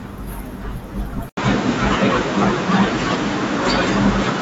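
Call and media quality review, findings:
Input likely switched to a poorer device at 1.29 s, persisting to end. 80 ms silence at switch. Nothing above 7.6 kHz afterwards; tone turns duller, boxier. Level shifts a few dB; new noise floor appears, well under signal.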